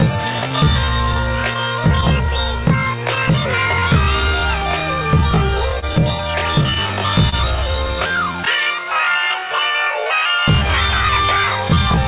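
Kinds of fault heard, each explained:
Clock drift between sender and receiver: The sender's clock runs roughly 3% slow against the receiver's, so the jitter buffer keeps draining and must be topped up. Unlike random packet loss, the effect is steady, one-directional and present across the whole clip.
Repeated timing corrections: From 0.17 s to 11.84 s the receiver stretches the audio to about 99% speed by repeating short pieces, adding roughly 150 ms overall. Every edit lengthens rather than shortens.
Scattered short gaps: Between 4.80 s and 7.34 s about five small holes, the longest around 30 ms, are bridged by continuing the last sound, roughly a tenth of a second in all. In the 4 kHz-limited call audio they show as brief ticks or smears confined to that stretch.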